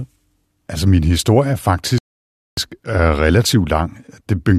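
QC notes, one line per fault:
1.98–2.57 s rebuffering stall. After "min historie er" the speech drops to silence, then resumes exactly where it stopped. The player ran dry, adding about 0.59 s.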